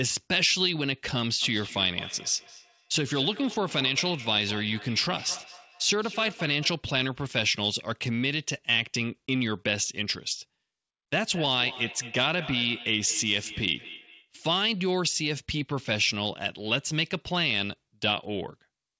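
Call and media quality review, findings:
Feedback echo between two devices, 1.42–6.85 s and again 11.35–14.33 s. Speech returns roughly every fifth of a second, thinner and ringier each pass, peaking about 15 dB and about 14 dB under the direct speech. Probable component: a second device in the same room replaying this call. Its mic re-captures the playback, and each device's echo canceller only knows its own output, so the loop survives. Codec path sounds like G.722, nothing above 8 kHz.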